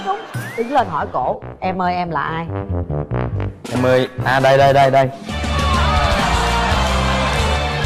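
No technical faults can be heard anywhere in this audio.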